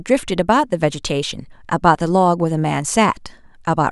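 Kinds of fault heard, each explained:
No technical faults detected.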